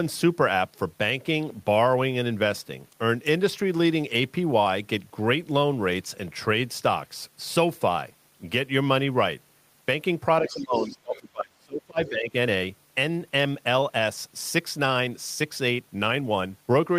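It's a speech clip, and from 10.42 to 12.34 s the talker's voice sinks by roughly 25 dB at its deepest, thinning and breaking up for about two seconds. That's speech suppressed in double talk, most likely an echo canceller that couldn't separate near-end speech from loudspeaker echo while both sides talked, so it turned everything down. Inside that stretch you also get the other side's voice leaking through, faint at roughly 25 dB under the talker, from 10.47 to 10.95 s and again briefly at 11.13 to 11.19 s, likely from leftover loudspeaker pickup the canceller didn't fully strip.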